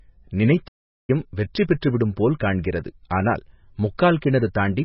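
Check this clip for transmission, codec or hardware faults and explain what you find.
Two faults are present: heavy codec damage across the whole clip and a playback stall near the start.

Throughout, the speech is most likely MP3 compressed, with a bit budget that fits a very low rate around 18 kbps. Starved of bits, the encoder zeroes weak frequency lines frame by frame, so the sound is watery and swirling, with smeared consonant attacks.

From 0.67 to 1.1 s a playback stall occurs. The player ran out of data or was blocked, likely the cause here, and the output falls silent for about 0.41 s mid-flow before the audio resumes, leaving an abrupt gap that interrupts the sound.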